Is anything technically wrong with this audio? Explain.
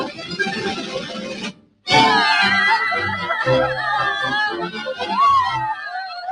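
Yes. A noise suppressor designed for speech is running on this material throughout the clip. It treats sustained tones, ambience and reverberant tails as if they were background noise and pulls them down. Sharp onsets slip through largely intact. The result is a level that swings by around 10 dB as the suppressor grabs and releases, so the sound pumps and thins, with held portions sagging between attacks.

The sound cut by the noise suppressor shows up in three places, where it misjudged what it heard as noise and attenuated it harder than its surroundings. From 0.05 to 1.87 s the drop reaches about 17 dB, so steady sounds in the opening stretch sink in level. From 4.69 to 5.05 s it sinks by about 9 dB, and from 6.08 to 6.26 s by about 6 dB, clipping decays short rather than letting them fade naturally.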